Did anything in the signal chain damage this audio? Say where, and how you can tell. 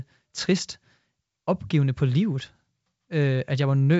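No, nothing damaged it.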